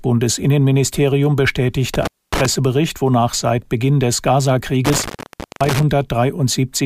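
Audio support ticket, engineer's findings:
Intermittent contact, two dropouts in the speech: 1.94–2.46 s (open about 0.25 s) and 4.85–5.83 s (open about 0.53 s). Signal cuts with crackle at each edge, faint hiss in the gap. Loose cable or plug briefly opening, so check connectors first.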